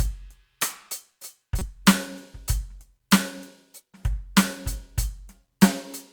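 At 1.59 to 1.62 s, a corrupt frame was decoded: damaged bits in roughly one compressed frame were played anyway, misplacing energy across frequencies. It sounds like a brief chirp, squeak, blip or burst of noise over the music, peaking around -15 dBFS, a thin vertical smear on a spectrogram.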